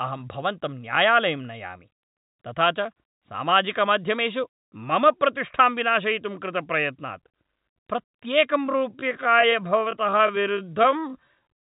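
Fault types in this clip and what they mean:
Time-stretched section: software likely slowed the ending to 0.623 speed by repeating short pieces; from 8.63 s the pace drags, pitch unchanged.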